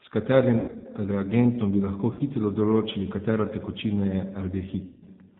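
A speech recording coded throughout with the G.729 codec, with plainly audible damage. Nothing above 4 kHz comes through. The voice sounds rough and slightly synthetic, as the decoder rebuilds it from a vocal tract filter, a pitch predictor and a few pulses, which fits an 8 kbit/s stream. VoIP packet loss concealed by the speech codec breaks in three times. From 0.60 to 0.86 s, about 180 ms of audio is missing across 240 ms, the longest gap 80 ms. From 2.13 to 2.21 s, 60 ms is lost. From 4.86 to 5.08 s, 180 ms is lost, with one 160 ms run. In each gap the decoder stretches the last sound into a fading buzzy tone or coloured noise, and the voice stays weak or distorted briefly after.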